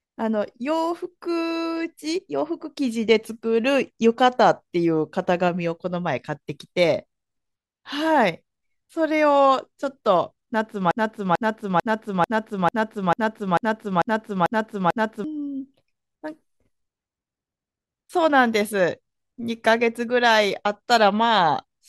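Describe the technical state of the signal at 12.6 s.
At 12.6 s you're inside a broken-record loop, 10.91 to 15.24 s: a 0.44 s fragment repeats ten times back to back, likely from a stalled stream replaying its last buffer.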